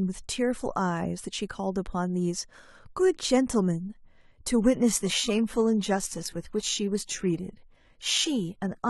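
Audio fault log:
4.62 s to the end: adaptive stream at a lower bitrate. The speech abruptly takes on heavier codec artefacts, with no gap. This fits a switch from around 96 kbit/s AAC to a 16 kbit/s HE-AAC version as the connection slowed.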